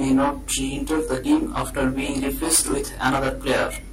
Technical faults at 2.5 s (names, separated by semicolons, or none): channel delay (comb filtering)